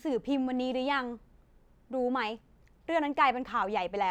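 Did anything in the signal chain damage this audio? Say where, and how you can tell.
No, nothing stood out on listening to this speech that would point to damage at any stage of the signal chain.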